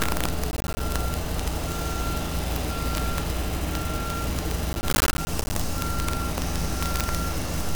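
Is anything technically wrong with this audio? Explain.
Yes, two faults can be heard.

Throughout the clip, the loudest moments break into violent, sharp cracks, far harsher than ordinary clipping. This is integer overflow. The signal is driven about 5 dB past the largest value the integer format can hold. Instead of being limited, each overshooting peak wraps to the opposite sign and jumps across the full range. Only a small share of samples, around one percent, goes over, so the cracks land on the peaks rather than running continuously.

From 0.51 to 0.80 s, and again from 4.73 to 5.56 s, a gritty tearing crackle rides on the sound and then stops. This is processor overload crackle. The processor falls behind and misses a run of short buffer deadlines in a row. Each missed buffer leaves a hard-edged silent gap. The spacing of the gaps points to buffers of roughly 10 ms, with about 20 lost in the first burst and about 30 in the longer second burst.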